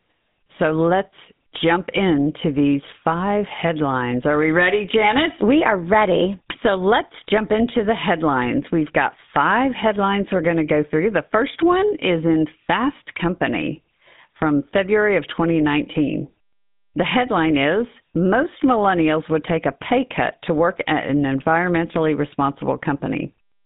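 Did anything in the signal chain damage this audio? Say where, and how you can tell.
Yes. Throughout, the speech is buzzy and gravelly within a 150 Hz to 3.7 kHz band. That points to the GSM full-rate codec, whose sparse pulse excitation fits 13 kbps.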